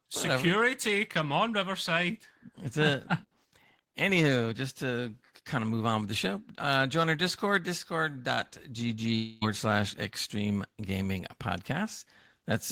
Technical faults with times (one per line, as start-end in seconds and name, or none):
9.15-9.43 long network dropout